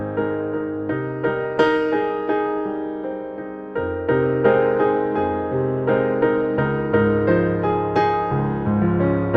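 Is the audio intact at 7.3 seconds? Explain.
Yes, at 7.3 seconds the audio is intact, with no dropout, glitch or other fault beyond the ordinary character of the call codec it passed through.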